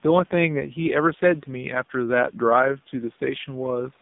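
Throughout the speech, the AMR narrowband mobile codec confines the voice to roughly 150 Hz to 3.7 kHz and codes it so coarsely that it turns buzzy and synthetic, which points to a low mode near 6 kbps. Plain band-limiting would stay clean rather than buzzy.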